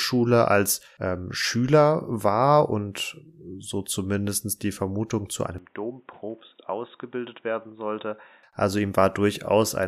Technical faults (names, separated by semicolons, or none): input switched to a poorer device